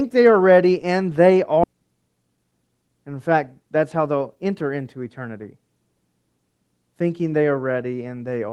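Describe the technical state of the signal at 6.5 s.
At 6.5 s the speech comes through intact, with no fault at that point, only the ordinary coding character of the Opus call path it travelled through.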